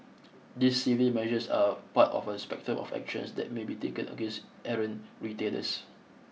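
Speech recording with no audible technical faults anywhere in the signal.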